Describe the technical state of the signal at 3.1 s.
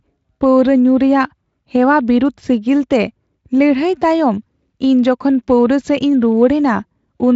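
At 3.1 s the speech is intact, with no dropout, distortion or other fault, and the wideband Speex coding here leaves only faint codec colouring and a top end that stops near 7.6 kHz.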